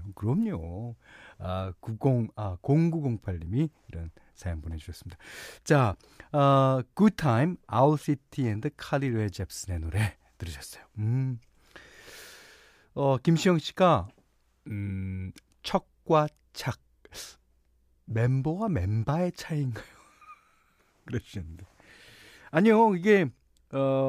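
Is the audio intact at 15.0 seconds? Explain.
Yes, at 15.0 seconds the speech plays through cleanly, with no dropout, click, distortion or other technical fault at that moment.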